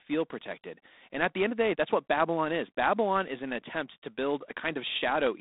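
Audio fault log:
Throughout: G.726 ADPCM. The speech carries a harsh, rasping hiss that rises and falls with its level, because each sample is coded as a few bits of difference from an adaptive prediction, and the coarseness fits 24 kbit/s. The sound sits in a telephone band of 250 Hz to 3.7 kHz, with nothing above 3.8 kHz. Steady line noise would stay put through pauses, and a low-bitrate vocoder would sound warbly rather than grainy.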